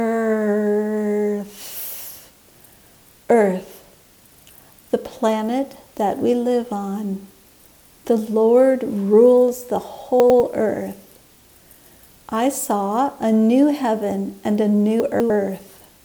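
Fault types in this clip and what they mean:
Chunks out of order: 100 ms blocks play late at 10.2 and 15.0 s, causing jumbled sound, waveform steps and vertical click lines on spectrograms.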